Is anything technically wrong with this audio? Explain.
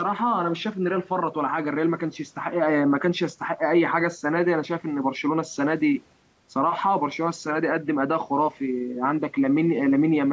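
No, nothing is technically wrong with this speech audio.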